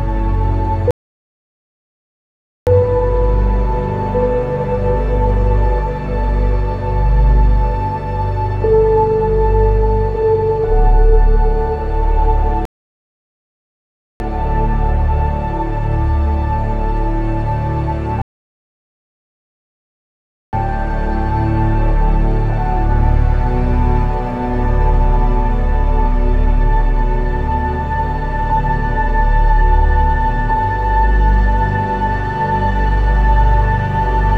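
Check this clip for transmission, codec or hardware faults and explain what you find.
Three rebuffering stalls interrupt the clip, at 0.91 to 2.67 s, 12.65 to 14.20 s and 18.22 to 20.53 s, lasting 1.76, 1.55 and 2.31 s. Each time, playback exhausted its downloaded audio and halted until more data arrived, so the sound drops to silence and then picks up exactly where it left off. Unlike a dropout or packet loss, no material is missing across the gap; the stalls only add time.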